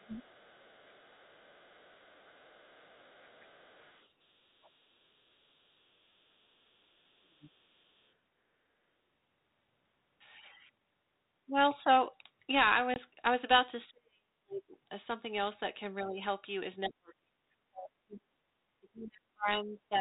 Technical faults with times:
0.00-0.27 speech suppressed in double talk
0.00-8.01 other side's voice leaking through
7.23-7.69 speech suppressed in double talk
12.94-12.99 packet loss on an ADPCM call
13.89-14.74 speech suppressed in double talk
16.01-16.09 other side's voice leaking through
16.03-16.20 speech suppressed in double talk
16.86-16.96 other side's voice leaking through
16.88-20.00 speech suppressed in double talk

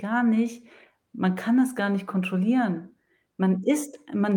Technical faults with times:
none

